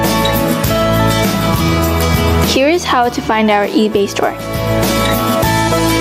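Gain pumping runs throughout: the gain ducks by around 20 dB under loud sounds, likely from excessive gain hitting a fast limiter. Unlike gating, the background rises rather than vanishing.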